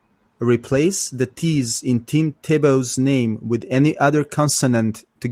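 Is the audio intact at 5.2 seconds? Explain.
Yes, at 5.2 seconds the speech is intact, with no dropout, glitch or other fault at that moment.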